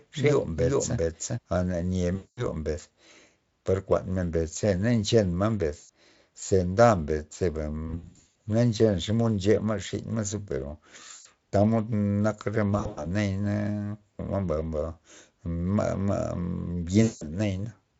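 From 0 to 1.38 s, a doubled audio track, likely from a second out-of-step capture, repeats everything about 400 ms later at near-equal level. The waveform shows each burst twinned.

VoIP packet loss concealed by the speech codec follows at 2.15–2.49, 5.77–5.89, 7.87–8.35, 11.11–11.26, 12.77–13.07 and 17.03–17.24 s. Speech smears into a fading buzz, which shows as frozen, blurred harmonics sinking in level.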